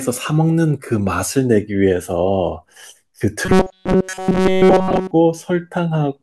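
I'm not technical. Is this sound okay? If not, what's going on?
No. From 3.46 to 5.12 s there is robotic sound from repeated short buffers. Most likely, fresh audio stopped arriving in time, so the playback kept looping the same tiny slice, about 5 ms long, in place of everything in that stretch. That constant looping stamps a fixed hum of 188 Hz onto the speech, so for well over a second it turns into a stiff, metallic buzz that only loosely follows the talking.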